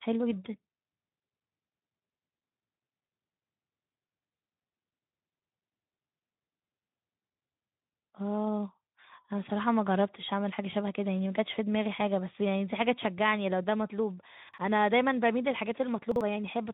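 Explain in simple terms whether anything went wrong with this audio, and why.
Two brief jumbled moments, at 14.49 s and 16.12 s, each lasting about a tenth of a second. These are chunks out of order: a slice of sound about 46 ms long arrived one slot late, so neighbouring pieces swapped places and created hard joins.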